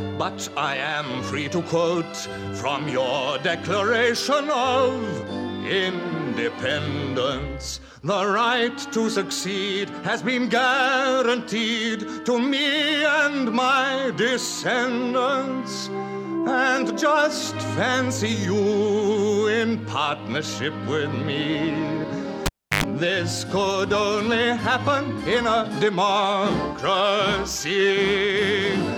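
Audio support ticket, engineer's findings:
Cable pulled and plugged in at 22.46–22.84 s: pop, about 330 ms dropout, then roughly 97 ms of 50 Hz mains buzz as the tip touched, pop on reconnect. Check the connector.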